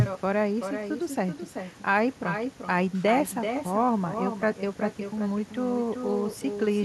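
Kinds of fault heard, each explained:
Echo with no canceller: the far end's loudspeaker output is picked up by its microphone and returned uncancelled, so throughout this speech every phrase is followed roughly 0.4 s later by a thinner copy about 7 dB below the original.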